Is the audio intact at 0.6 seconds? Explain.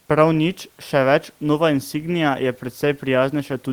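Yes, the speech is intact at 0.6 seconds, with only the room's own background noise sitting about 40 dB below it.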